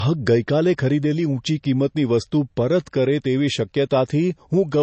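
From start to finish the speech has nothing above 8.2 kHz, a dull, band-limited sound with smeared, watery detail. This is likely low-bitrate audio saved at a high bitrate: an MP3 first encoded at a low rate and re-saved higher, keeping the original cut-off and artefacts.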